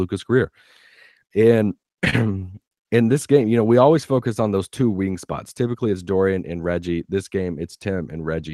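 This speech clip, carried over a WebRTC call path whose top end stops near 12 kHz, consistent with Opus at around 32 kbps, drags and stutters from 1.59 to 2.74 s, just before "in this game you". These are repeated stalls (stutter): the jitter buffer kept running dry, and 11 short gaps, the longest 63 ms, were filled by extending the preceding sound, with nothing lost. After "those two wing spots", from 5.61 to 5.93 s, the speech briefly sounds hurried at unchanged pitch. This is a jitter buffer speed-up, which cut about 40 ms of pitch-period slices to drain excess delay, running the audio at 111% speed.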